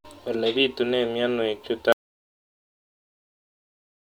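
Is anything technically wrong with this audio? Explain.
Yes. At 1.92 s the speech drops out to complete silence and stays silent to the end. This is an audio dropout to silence. The input was likely lost, through a disconnected device, a failed link or a mute, while silence kept being written. No room tone remains in the gap.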